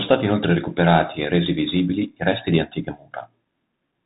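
Throughout, the speech sounds muffled, cut off above 3.8 kHz, with scratchy s sounds and granular hiss from the Bluetooth CVSD headset codec's adaptive one-bit step coding.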